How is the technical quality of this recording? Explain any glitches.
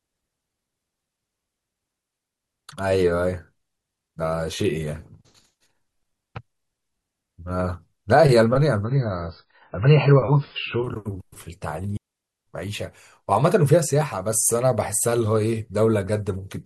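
The recording has three glitches: two wireless dropouts and one stretch of reduced streaming quality.

Digital wireless dropouts occur at 1.99–2.44 s and 11.97–12.47 s, lasting about 0.45 s and 0.5 s. The receiver lost too much data from the radio link and muted quickly. The result is a clean hole of near silence, with no noise burst before or after.

An adaptive stream at a lower bitrate runs from 8.84 to 10.84 s. The connection slowed, so the player switched to a much leaner encoding. Nothing above 5.3 kHz survives, and the speech turns dull, with more codec artefacts. This fits a drop to very low-bitrate MP3, around 16 kbit/s. The change is abrupt but leaves no gap.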